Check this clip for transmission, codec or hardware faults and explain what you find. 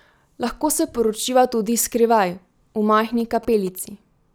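One fault is present: GSM signalling bursts from 2.98 to 3.69 s. A nearby 2G phone's radio pulses, repeating near 217 Hz, are rectified by the audio circuitry into a galloping dit-dit buzz roughly 20 dB below the speech. Unlike steady mains hum, it arrives in gated clusters.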